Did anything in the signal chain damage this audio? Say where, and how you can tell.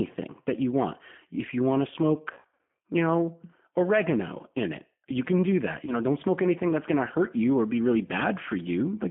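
Yes. The G.729 codec damage runs through the whole clip, at the codec stage. The sound is confined to roughly 150 Hz to 3.4 kHz and has a rough, synthetic edge, which points to G.729A at 8 kbit/s rebuilding speech from a filter, pitch predictor and sparse pulses.

VoIP packet loss concealed by the speech codec, a network fault, shows up from 2.33 to 2.77 s and again from 5.85 to 5.96 s. In the first stretch, gaps totalling about 360 ms are spread over roughly half a second, with the longest run 80 ms. The decoder extrapolates a buzzy tone or coloured noise that fades, and the speech stays weak for a while afterwards. The later gap is about 20 ms long, which fits one lost packet.

Hard clipping, from 4.57 to 4.64 s, happens at a level or converter stage. Peaks exceed the available range by about 1 dB and are cut flat. The flattened tops add high harmonics, heard as a brief crackle on the peaks.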